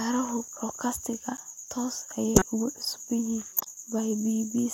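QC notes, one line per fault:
0.44 s and 1.37 s, block of digital silence: two sharp ticks in the speech. About 3.4 ms and then 10 ms of samples drop straight out with no fade, so each abrupt edge clicks. Likely a short run of output samples was left unfilled.
2.35–2.44 s and 3.54–3.67 s, corrupt frame decoded: brief squeaky, noisy bursts with error peaking around -5 dBFS. Each spans a few compressed frames whose damaged bits were decoded anyway, placing energy at the wrong frequencies.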